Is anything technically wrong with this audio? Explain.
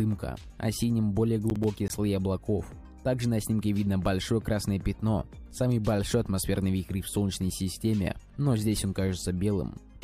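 Yes. From 1.5 to 1.9 s there is processor overload crackle: roughly 10 ms buffers miss their deadlines, and a handful of silent gaps produce a gritty, clicking tear.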